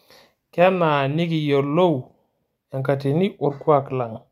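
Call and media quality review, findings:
No faults found on review of the speech recording. Nothing in the audio calls for a ticket.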